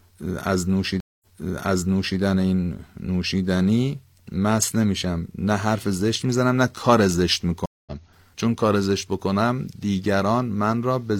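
At 1.00 s and again at 7.66 s, a stream reconnect breaks the speech. Each gap is about 0.21 s of silence before a fresh decoder fades back in. Unlike a plain dropout, playback resumes elsewhere: first 0.98 s earlier, repeating audio, then roughly 0.15 s later, skipping some.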